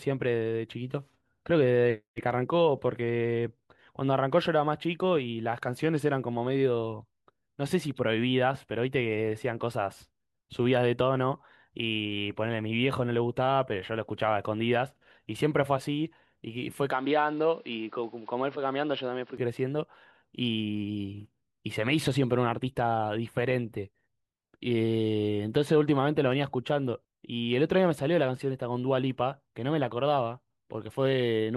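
At 16.92 s the speech abruptly loses everything above 5.6 kHz and drops by roughly 5 dB, with no gap at the transition, and a new background noise floor appears, sitting roughly 35 dB under the signal. The duller, boxier sound persists until 19.37 s, when full bandwidth and the original level return. This is likely an input switched to a poorer device, where a narrower-band microphone path with its own noise and gain briefly replaced the primary input.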